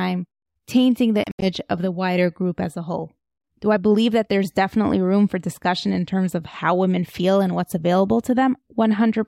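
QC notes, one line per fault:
1.24–1.45 s, Bluetooth dropout: the speech breaks up into a cluster of silent gaps, roughly 122 ms of sound missing in total, scattered across about 180 ms, with the longest single hole around 76 ms. Each time it picks up again, it's moved on as if it had kept playing underneath. That's likely audio packets arriving too late at the headphones and getting thrown away, with silence filling in until good ones turned up.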